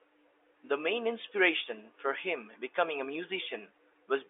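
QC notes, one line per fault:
3.42 s, dropped samples: a single sharp, isolated click, far too brief to remove any audible sound, through the telephone-band G.711 path that stops near 3.7 kHz. Likely a sample or so missing, so the waveform jumps abruptly to a later value.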